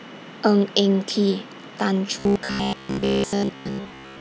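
From 2.19 s to the end of the clip the speech collapses into robotic sound from repeated short buffers: a stiff, metallic buzz near 67 Hz that still loosely tracks the syllables. The likely cause is audio arriving too slowly, so a chunk of about 15 ms is looped to fill gaps, with repeats making up most of that stretch. On a spectrogram, evenly spaced vertical striations and harmonics of 67 Hz appear; the waveform shows identical short segments tiled end to end.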